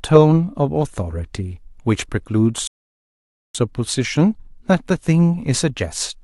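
At 2.67 s the player exhausts its downloaded audio and halts, a rebuffering stall, until fresh data arrives at 3.55 s. The speech drops into 0.87 s of silence, then continues from exactly where it stopped, nothing skipped, just time inserted.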